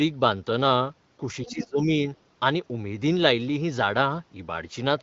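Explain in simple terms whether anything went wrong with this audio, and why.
Speech suppressed in double talk, from 1.43 to 1.98 s: the talker's voice dips sharply and drops out in pieces, likely because an echo canceller, hearing both sides at once, turned everything down.

Other side's voice leaking through, at 1.46 to 1.52 s: a brief, faint scrap of a second voice appears, likely the far end's loudspeaker sound not fully removed from the microphone.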